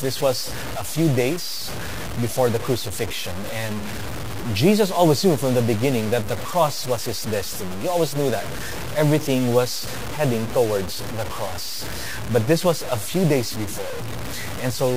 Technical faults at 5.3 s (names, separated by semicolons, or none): low bit depth without dither